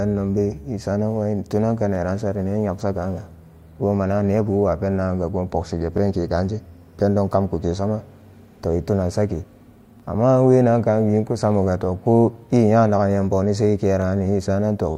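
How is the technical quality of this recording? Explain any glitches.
The recording has one recurring glitch. Overlapping chunks occur at 1.95–1.98 s after "tunan ka", 5.98–6.00 s before "kaaan je pendo kamku", 10.00–10.02 s, and 14.02–14.04 s after "nyam boni se". Every 4 s, each chunk restarts early, replaying about 21 ms and producing a brief click-like stutter.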